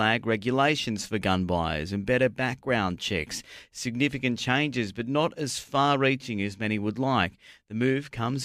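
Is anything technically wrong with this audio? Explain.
No, nothing technically wrong can be heard in this speech recording. No fault turns up anywhere in the clip.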